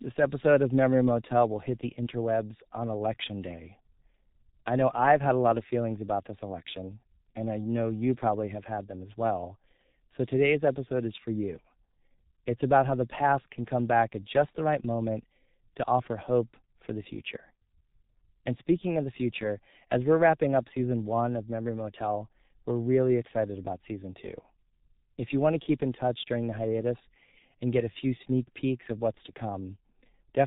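From start to finish the speech carries heavy G.723.1 codec damage. Nothing gets through above about 3.8 kHz, so it sounds muffled, and the codec's slow, coarse model of the voice, refreshed only every 30 ms frame, leaves a hoarse, rough texture with consonants smeared together. That degree of squeeze fits the 6.3 kbit/s mode, the codec's higher rate, but still very little data for speech.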